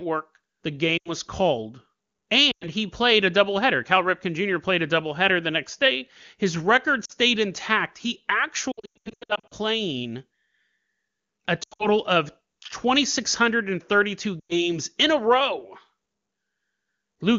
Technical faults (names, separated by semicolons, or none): lost AMR speech frames